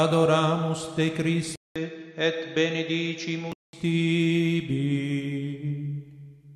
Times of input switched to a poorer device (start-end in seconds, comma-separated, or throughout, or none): 1.56-3.73